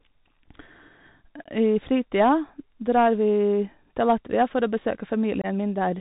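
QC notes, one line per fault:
throughout: Bluetooth CVSD headset codec. Nothing passes above 4 kHz, s sounds turn scratchy, and a granular hiss sits under the speech. That grain sets it apart from a clean narrowband low-pass.
1.44–1.48 s and 5.42–5.46 s: unconcealed Bluetooth headset packet loss. Abrupt holes of 15 ms and 22.5 ms, the first just before "I fritida drar vi", about two and three lost headset packets. There is no smoothing fill, unlike concealed loss.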